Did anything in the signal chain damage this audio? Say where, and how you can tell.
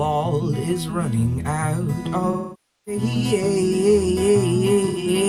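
Yes, at the codec stage: AAC frame loss with concealment. From 2.31 to 3.02 s about 0.55 s of coded audio is missing. The decoder extends the last good spectrum, so the sound smears, then decays toward silence and fades back in. Between 4.87 and 5.07 s, shorter dropouts scattered over about 0.2 s, the longest roughly a tenth of a second, leave brief noisy, phasey patches where the spectrum is regenerated rather than decoded.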